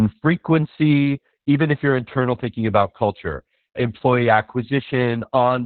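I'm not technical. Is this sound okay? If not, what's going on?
No. Heavy Opus voice compression squeezed the speech into a narrow band, so it sounds muffled, hoarse and slightly robotic throughout.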